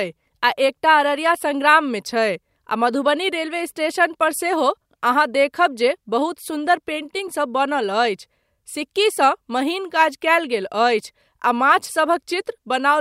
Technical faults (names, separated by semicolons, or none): none